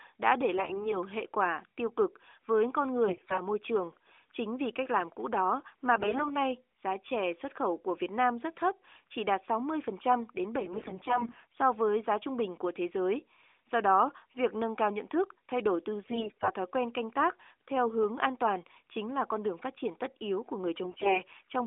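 AMR bit errors strike at 0.58–0.93 s, 3.08–3.41 s, 5.96–6.36 s, 10.60–11.60 s, 16.04–16.53 s and 20.84–21.22 s. In these stretches a sizeable share of the lightly protected bits in each mobile frame arrive flipped, so the excitation pulses and fine pitch, gain and spectral values decode wrongly. The sound turns hoarse, scratchy and gargly while keeping roughly its pitch and level. That continuity sets it apart from packet loss, which brings gaps, fades or repeated frames. The surrounding narrowband mobile coding stays band-limited to the telephone range, which fits a 12.2 kbps AMR mode.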